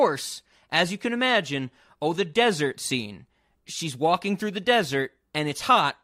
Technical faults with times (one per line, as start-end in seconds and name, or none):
none